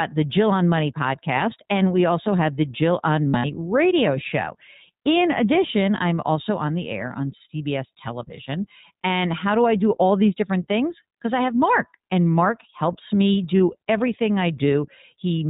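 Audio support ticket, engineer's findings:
iLBC codec, whole clip: band-limited to 4 kHz, slightly rough, synthetic speech; plainly audible coding damage. Narrowband VoIP codec coding each frame's excitation independently; character fits the 15.2 kbps mode with 20 ms frames.

Lost iLBC frames, 3.28–3.46 s and 13.58 s: brief held, buzzy-breathy vowel in place of speech, then instant recovery. Decoder concealment repeating the last pitch cycle with noise; about 120 ms lost over 160 ms at first event, longest run around 70 ms; second event a single 20 ms gap.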